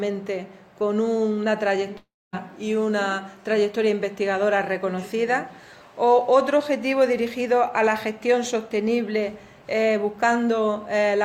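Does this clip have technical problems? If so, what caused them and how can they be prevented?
Yes. A long network dropout runs from 1.97 to 2.35 s. The last sound before it is stretched into a fading buzz or hiss, which dies away into about 250 ms of silence. The audio then resumes with roughly 360 ms permanently lost. The likely cause is a burst of lost packets, with the receiver's concealment filling the hole until it gave up. A more stable connection with forward error correction or a deeper jitter buffer would prevent this.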